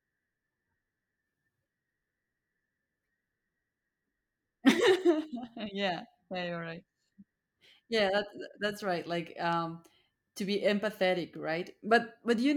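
No technical fault can be heard in this speech recording; the signal stays continuous and stable throughout.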